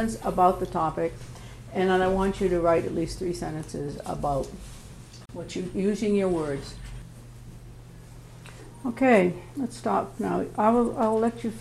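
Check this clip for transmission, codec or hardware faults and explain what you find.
There is one fault, a gap at a join of encoded pieces, from 5.26 to 5.29 s. Separately encoded pieces of about 10 s were joined untrimmed, leaving encoder delay and padding: a 35 ms hole with smeared edges before the sound resumes.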